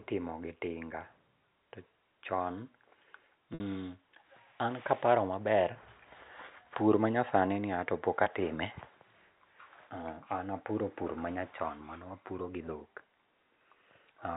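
Speech over a G.711 telephone path, with its 4 kHz ceiling, has two gaps covered by packet loss with pitch repetition. At 3.54 to 3.60 s, 60 ms is bridged by looping the last pitch period, fitting about three 20 ms packets. The sound holds as a brief buzzy note that fades. At 8.24 to 8.26 s, a 20 ms gap gives only a slight hold. A spectrogram shows frozen, flat harmonic stripes, and the waveform shows identical repeating cycles decaying before speech resumes.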